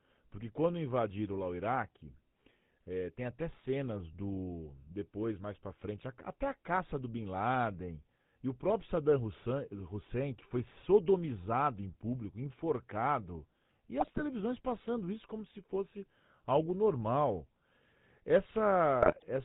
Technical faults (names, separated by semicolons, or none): GSM full-rate codec; GSM bit errors